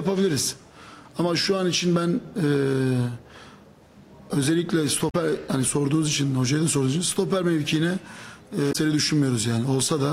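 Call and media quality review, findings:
Damaged data in a compressed stream: brief chirp, squawk, click or short hole at 5.08–5.15 s and 8.69–8.76 s, about 70 ms each. Decoder misreads corrupted frames and loses sync until the next frame header. Spectrogram and waveform show a short disruption at each point.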